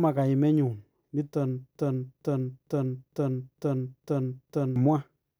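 From 1.75 s to 4.76 s the speech sticks: a single fragment about 457 ms long plays over and over, seven times back to back, each repeat identical to the last, before normal audio resumes. This is a broken-record loop. The likely cause is a stall in the player, encoder or stream, which kept resending the last chunk it still held, so whatever should have been heard across those three seconds is gone.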